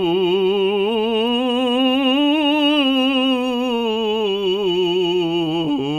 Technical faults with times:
none

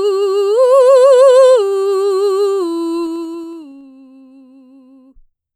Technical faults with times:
2.97-3.90 zipper noise

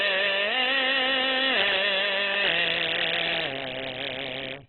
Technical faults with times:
0.00-4.69 Opus compression

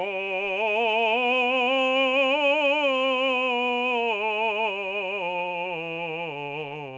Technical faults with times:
none

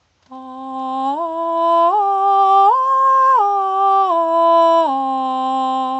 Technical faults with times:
none

